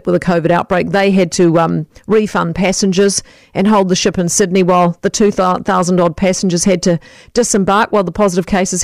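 Hard clipping runs through the whole speech clip: the signal is driven about 5 dB past what a stage can pass, so a few percent of samples hit the ceiling. The waveform shows flat-topped peaks, the spectrogram shows smeared high-frequency harmonics, and the peaks crackle.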